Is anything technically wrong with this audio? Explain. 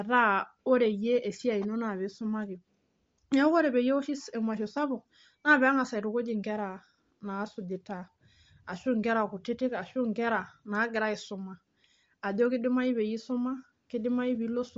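Yes. Throughout, the speech has a breathy, grainy edge and nothing above 7.7 kHz. The likely cause is Bluetooth LC3 compression: the codec discards much of the upper spectrum and fills it with shaped noise. The damage is plainly audible here, consistent with a 32 kbps stream in 10 ms frames.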